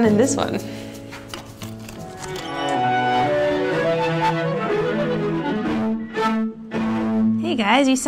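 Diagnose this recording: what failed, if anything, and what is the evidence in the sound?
No audible faults detected.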